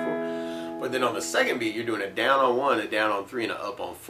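Nothing here sounds wrong: there's no glitch, dropout or other technical fault anywhere in the clip.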